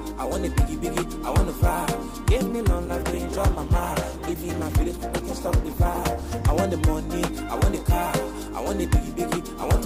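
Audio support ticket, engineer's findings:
Codec artefacts abruptly rise, 2.49 to 6.49 s; sharp quality step at both edges, no gap or dropout. Adaptive stream at a lower bitrate: connection slowdown forced a lower rendition, consistent with Opus falling from 64 to 16 kbit/s.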